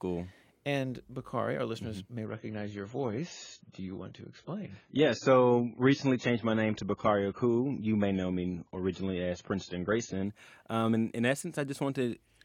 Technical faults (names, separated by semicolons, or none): adaptive stream at a lower bitrate